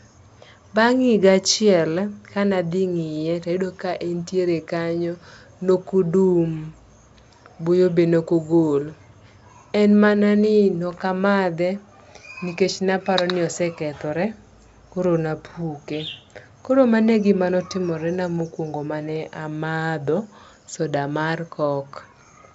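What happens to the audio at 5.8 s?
Nothing goes wrong at 5.8 s: the audio is intact there, carried by G.722 wideband telephone coding at 64 kbit/s with its usual ceiling near 7.7 kHz.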